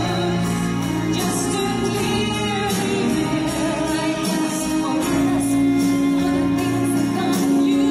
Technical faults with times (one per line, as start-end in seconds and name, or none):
1.21-5.21 adaptive stream at a lower bitrate